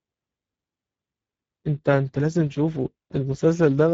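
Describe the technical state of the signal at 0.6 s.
At 0.6 s the speech carries Speex codec damage, present through the whole clip. Too few bits for the excitation leave the speech plainly hoarse and noisy, which fits a bitrate near 10 kbps. Nothing remains above 7.7 kHz.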